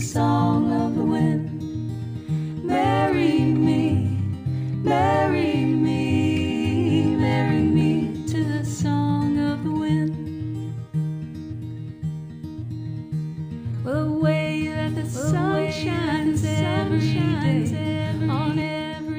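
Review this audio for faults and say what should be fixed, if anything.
A doubled audio track runs from 14.76 s to 18.62 s: a second full-band copy of the sound trails the original by about one and a half seconds, roughly 5 dB quieter, with no decay or room colouring, and it switches on and off abruptly. The likely cause is a second capture path or misaligned edit feeding the same material into the mix. On a spectrogram the same patterns reappear, slightly fainter, shifted right; the waveform shows overlapping, offset envelopes. Route each source through a single path and check edits for duplicated regions before mixing down.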